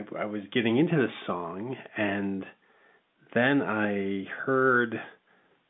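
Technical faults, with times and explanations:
No technical faults can be heard in this recording.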